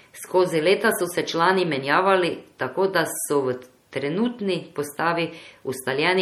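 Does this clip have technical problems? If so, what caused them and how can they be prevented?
Yes: MP3 compression, likely the cause, damages the speech throughout with watery swirling and smeared onsets as weak frequency lines flicker between frames. This fits a low bitrate near 48 kbps and sounds unlike noise-reduction warble, since the swirl follows the sound rather than a noise floor. Encode at a higher bitrate or keep an uncompressed master.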